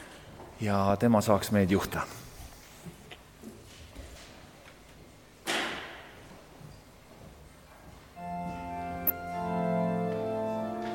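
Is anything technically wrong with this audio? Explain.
Yes. Damaged data in the compressed stream produces brief glitches at 1.91–1.94, 4.13–4.16, 6.27–6.30 and 9.07–9.10 s. At each point, corrupted bytes cause the decoder to misread frames and lose sync until it finds the next valid header.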